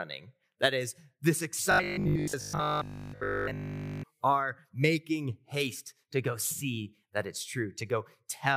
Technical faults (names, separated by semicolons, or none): robotic sound from repeated short buffers